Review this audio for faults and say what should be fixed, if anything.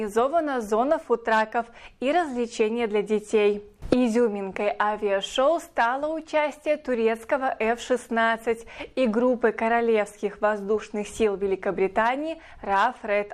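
No faults turned up in this audio, so nothing needs to be fixed.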